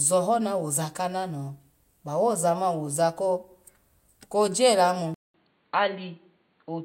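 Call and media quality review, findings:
Input switched to a poorer device at 5.14 s, likely a fallback to a lower-grade microphone or a headset call profile. A 200 ms dropout at the switch. From there to the end, nothing above 4.5 kHz, so the speech turns dull and boxy. Level stays the same. A new noise floor sits about 45 dB below the signal.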